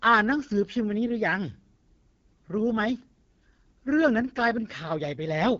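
Speech throughout sounds rough and raspy, with a buzzy, grainy edge and nothing above about 7.4 kHz. That is the sound of the AMR wideband (HD Voice) codec at one of its lowest rates; the plainly audible roughness points to about 8.85 kbit/s. At such a low rate, too few bits describe the excitation pulses driving the vocal tract model below 6.4 kHz, and the top band is only noise shaped to fit.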